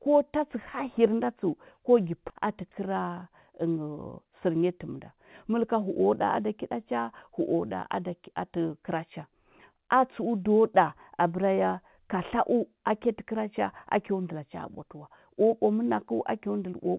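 At 2.3 to 2.32 s the speech does a skip ahead: playback jumps forward with no gap filled in, and roughly 0.4 s of speech is simply absent, the audio on either side butted together. This points to the jitter buffer discarding a backlog of queued audio to cut its delay by about that amount. The narrowband sound, with nothing above 4 kHz, fits the G.711 mu-law call path.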